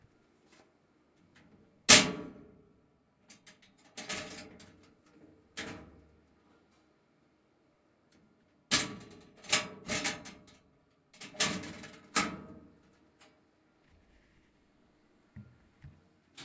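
Nothing in these everyday sounds calls for comment, since there's no technical fault to be heard anywhere along the way.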